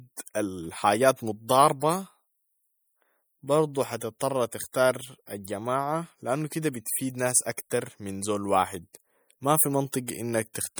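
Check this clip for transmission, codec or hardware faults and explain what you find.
One codec fault runs through the whole clip. Throughout, the speech has a plainly audible watery swirl, with nothing above 20.9 kHz. This is likely MP3 compression, consistent with a 64 kbps encode that drops weak frequency lines frame to frame.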